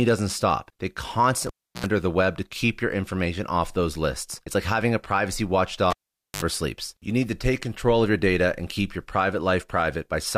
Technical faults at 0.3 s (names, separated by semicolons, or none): none